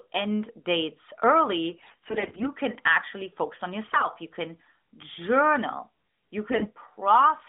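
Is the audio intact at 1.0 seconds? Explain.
Yes, the audio is intact at 1.0 seconds: nothing goes wrong at that moment beyond the steady narrowband character of the AMR-NB mobile line, which carries the speech through a band of roughly 200 Hz to 3.7 kHz with only light codec colouring.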